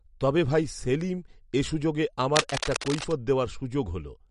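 From the start, the speech sounds watery and swirly, with nothing above 11.2 kHz. This is likely MP3 compression at a low bitrate, which fits about 48 kbps.

From 2.36 to 3.15 s, dense, uneven scratching rustles over the speech, roughly 5 dB below it. This is cable scratch noise, likely from a worn contact being moved.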